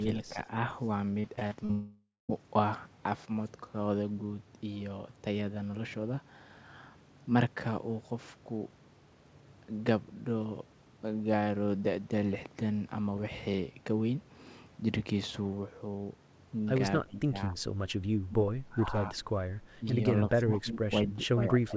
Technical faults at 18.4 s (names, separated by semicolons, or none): speech suppressed in double talk